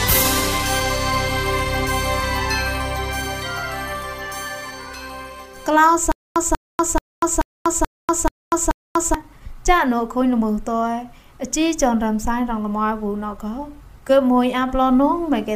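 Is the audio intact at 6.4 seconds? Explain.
No. From 6.12 to 9.14 s there is a stutter with silent gaps: a 190 ms burst of sound repeats seven times, each followed by about 242 ms of digital silence, every 432 ms. This is likely a stalled stream replaying its last fragment, so the intervening audio is lost.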